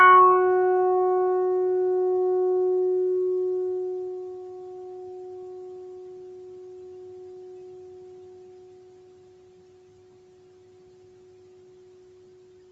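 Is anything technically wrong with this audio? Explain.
No, nothing here is faulty: the sounds simply carry the normal signature of a call path, with the microphone's high-pass taking out the lowest bass and the call codec's coding leaving nothing above 8 kHz.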